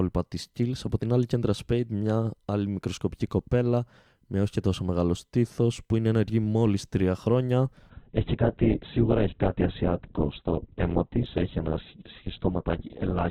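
At 7.90 s the adaptive stream switches to a lower bitrate, apparently because the connection slowed, and it stays there until the clip ends at 13.31 s. The change is abrupt but leaves no gap. The speech suddenly loses everything above about 4.1 kHz, so it turns dull and narrowband, and codec artefacts thicken. That fits a drop from roughly 64 kbit/s Opus to around 8 kbit/s.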